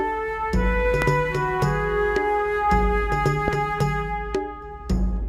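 At 1.02 to 1.04 s a loud pop cuts through, peaking roughly 20 dB above the surrounding sound, and a second follows at 3.48 to 3.50 s, somewhat quieter at around 15 dB above it. Each is a single short, sharp pulse lasting about 22 ms. The audio continues underneath both. The cause is likely a sudden voltage step from a connector, a switch or static discharge, shaped into a brief thump by the downstream circuitry.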